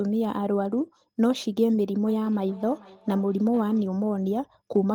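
From 2.07 s to 4.04 s a feedback echo between two devices appears: a nearby device replays the call, this microphone recaptures it, and each syllable returns roughly every 0.4 s, thin and ringing, about 20 dB down. A spectrogram shows evenly spaced faint copies, and the waveform shows small trailing bursts.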